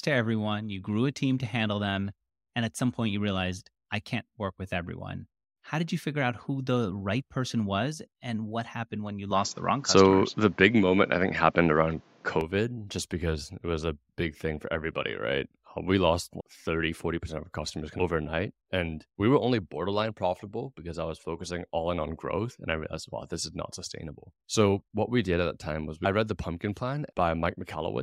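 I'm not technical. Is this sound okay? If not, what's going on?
No. From 9.31 to 12.41 s, just after "what happened when you", the sound turns duller and a little boxy, loses everything above 7.6 kHz, shifts noticeably in level and picks up faint new background noise, then clears at "just because it was". This is likely an input switched to a poorer device, with no gap at the switch.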